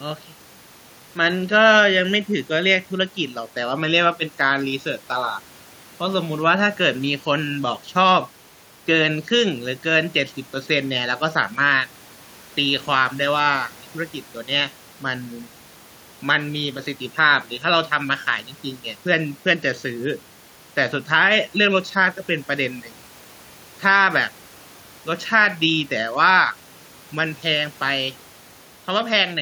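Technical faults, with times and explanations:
No technical faults are audible anywhere in this recording.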